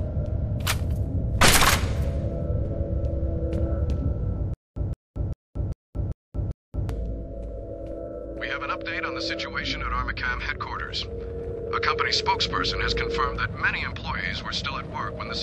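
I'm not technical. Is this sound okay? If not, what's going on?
No. From about 4.54 to 6.89 seconds the sound catches on itself: a tiny snippet, about 168 milliseconds long, repeats six times, each followed by roughly 227 milliseconds of dead silence, so it pulses evenly about every 0.4 seconds. This is a stutter with silent gaps. The likely cause is the playback or stream stalling, replaying its last fragment at each retry before running empty. Whatever should have played during those seconds is gone.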